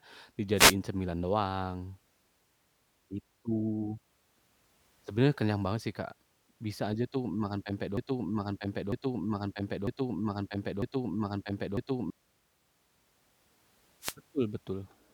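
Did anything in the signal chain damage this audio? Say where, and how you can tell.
Yes. Wireless microphone noise hits at 0.55 to 0.75 s and 14.00 to 14.15 s: brief bursts of static where the FM radio link faded and receiver noise rose.

A broken-record loop runs from 7.97 to 12.10 s: a 0.95 s fragment repeats four times, likely a stalled player, encoder or stream resending its last buffer.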